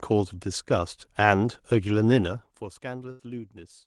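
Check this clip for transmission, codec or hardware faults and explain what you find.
One transmission fault stands out in this speech clip: a burst of packet loss near the end.

From 3.11 to 3.22 s, a run of packets never arrived in time. The receiver covered the gap for roughly 80 ms by extending the last sound and fading it, heard as a brief held buzz or hiss dying away. About 80 ms of speech is skipped when normal audio resumes. On a spectrogram, the harmonics flatten into straight, fading bands before resuming abruptly. The waveform shows a repeating, shrinking pattern.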